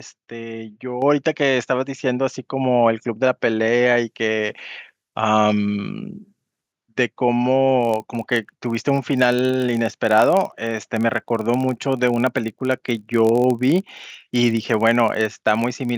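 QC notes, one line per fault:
1.02 s, microphone volume stepped up. The speech and the background noise jump in level together, by about 6 dB, in a single step. The call software judged the microphone too quiet and raised the device's input volume at once instead of ramping it. Because the change sits at the input, everything after this point is louder, room tone included. It is heard as a sudden lift, not a natural change in delivery.
4.02 to 6.72 s, pre-emphasis left on. The treble is lifted by about 10 dB at 10 kHz relative to 1 kHz, following the 50 µs FM curve. That boost is meant to be undone by a matching de-emphasis stage, and here it was not. The speech turns thin and bright. Sibilants hiss and stand forward. The lower body of the voice sounds weak beside the exaggerated top end.
7.81 to 15.97 s, filter restarted on every block. A filter in the chain loses its state at each block boundary and restarts from silence. 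Each block therefore opens with a small transient. These repeat at 46.9 Hz, which fits a 1024-sample block. The result is a low buzz under the speech. It grows with loud passages and fades in quiet ones, because each transient scales with the signal entering the filter.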